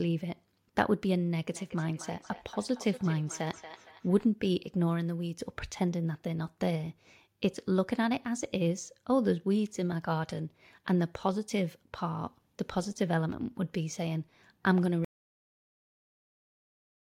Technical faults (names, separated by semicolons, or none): feedback echo between two devices; cut-off end